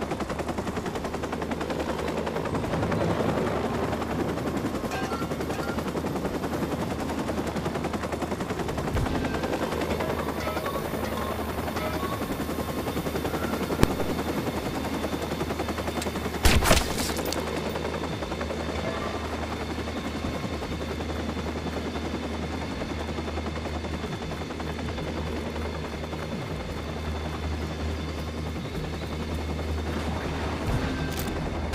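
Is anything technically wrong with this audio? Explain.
Yes. At 13.83 s there are invalid numbers at full scale: a calculation produced infinite or invalid values, which were forced to the maximum level. The output sticks flat at one extreme value, far beyond the audio's peaks, for about 1.45 ms, which fits a 64-sample block. That is heard as one sharp bang.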